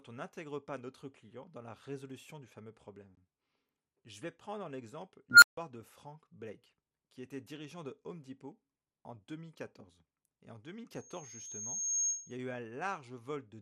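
The speech has a dull, gurgling, grainy quality from start to finish, with upper bands flickering in and out. That's likely MP2 compression, and the damage is plainly audible, which fits a low rate of around 80 kbps that starves the top sub-bands of bits.

At 5.31 s an unstable filter kicks in. A tone somewhere around 1.5 kHz swells over about 110 ms into a loud squeal, then the output overflows and drops out for about 150 ms before things reset at 5.57 s.

Then from 10.95 s to 12.37 s there's a loudspeaker feedback squeal. A single 6.5 kHz tone takes roughly a second to build until it sits around 15 dB above the speech. That's the mic-to-speaker loop running above unity gain at that one frequency.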